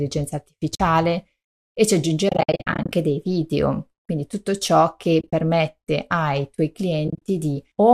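At 0.75 to 0.80 s, 2.29 to 2.93 s (before "dei video quindi tutto"), 5.21 to 5.33 s and 7.08 to 7.22 s, AAC frame loss with muting leaves soft-faded gaps, seen as blank vertical stripes in the spectrogram and tapered dips in the waveform. Each lost frame is about 10 ms, with runs up to about 70 ms, likely from low-delay AAC frames.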